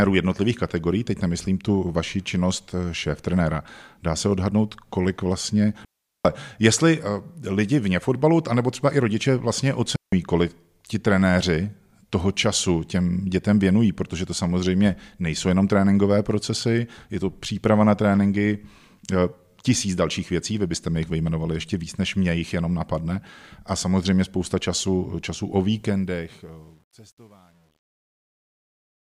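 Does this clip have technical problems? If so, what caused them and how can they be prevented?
Yes. Digital wireless dropouts cut the speech at 5.85 s for 0.4 s, after "se odhadnout kolik vlastně", and at 9.96 s for 0.17 s, between "třeba i rodiče vlastně" and "kolik ti trenéři toho". The receiver lost too much data and muted, leaving flat, clean gaps in the waveform and blank vertical strips on a spectrogram, with no noise bursts at either edge. Keeping the transmitter close to the receiver, in line of sight and on a clear channel, prevents this.

Truncation distortion on a fade begins at 25.77 s, after "spousta času času o", and is worst from 26.42 s to the end. The fade-out was computed without dither at a resolution that fits 10 bits, so it turns gritty. On a waveform the quiet tail becomes visible square steps, and a spectrogram shows broadband speckle. Rendering fades at a high bit depth and dithering the final output prevents this.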